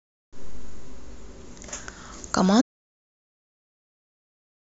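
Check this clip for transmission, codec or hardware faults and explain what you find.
There's one fault here: an audio dropout to silence starting at 2.62 s and running right to the end of the clip. The speech is going along fine, then just stops dead mid-flow, with no fade and no room tone left behind, only silence. That points to the input being lost, most likely a disconnected device, a failed link or an accidental mute, while the recorder kept writing. Whatever was said after that point is simply gone.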